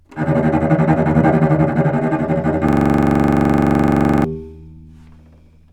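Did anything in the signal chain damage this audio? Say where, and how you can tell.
Yes. At the driver or buffer stage, a system hang loop froze the host while the hardware kept replaying its ring buffer. From 2.69 to 4.24 s, one 42.67 ms slice, which fits a 2048-sample buffer, repeats exactly 37 times, giving a rattling stutter at 23.4 Hz.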